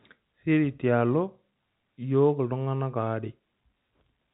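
No technical faults are audible.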